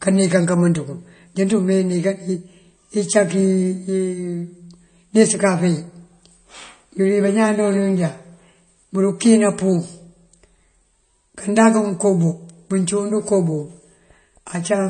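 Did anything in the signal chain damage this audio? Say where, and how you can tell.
Yes, at the codec stage, throughout the speech. Nothing is present above 9.1 kHz, and weak high components flicker in and out, giving a watery, swirly texture with smeared consonant attacks. That pattern of dropouts, absent from a simple low-pass filter, points to MP3 compression, likely at a bitrate around 32 kbps.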